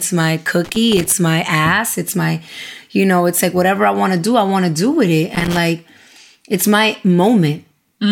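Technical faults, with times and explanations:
0.64–1.12 s and 5.35–5.58 s, loose connector crackle: irregular scratchy bursts, the first just before "my ass", the second just after "to do with it". A worn contact rapidly breaking and remaking chops the signal, showing as ragged gaps and spikes in the waveform and broadband vertical streaks on the spectrogram.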